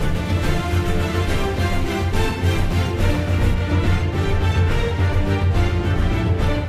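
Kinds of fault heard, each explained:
De-emphasis applied wrongly, from 3.54 s to 6.68 s: a treble-cut filter meant to reverse pre-emphasis has been applied where that boost was never present, or applied a second time, so the high end rolls away in a smooth, gradual slope rather than a sharp cut. Here the level at 10 kHz sits about 8 dB below that at 1 kHz, and from 3.54 s onward the sound turns dull and muffled.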